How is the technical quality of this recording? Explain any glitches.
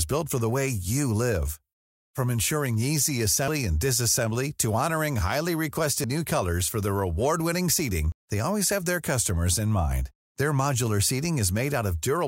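The recording has two brief glitches, likely a dropped buffer (overrun) each time. The capture software fell behind, the hardware overwrote roughly 40 ms of audio before it was read, and the remaining audio on either side was spliced directly together. At 6.04 s, between "honoring highly" and "new colors for", and at 8.12 s, just before "they always have their", the speech skips forward with no gap of silence.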